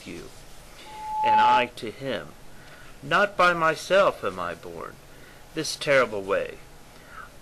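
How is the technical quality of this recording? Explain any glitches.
There's one real problem here, a loudspeaker feedback squeal from about 0.85 s to 1.71 s. A mic was picking up the speaker it was feeding, and at 859 Hz the loop gain crept past one, so that tone kept re-amplifying itself. You hear a pure whistle swelling over roughly half a second until it sits around 10 dB above everything else, then it cuts off.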